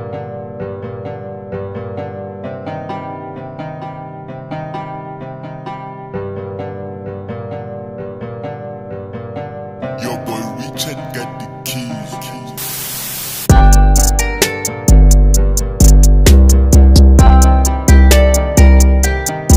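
From 13.50 to 14.43 s, 15.81 to 17.44 s and 17.88 to 19.05 s, hard clipping flattens the peaks, overdriven by about 6, 6 and 5 dB. The cut tops add high harmonics, unlike soft saturation's gentler, rounded distortion.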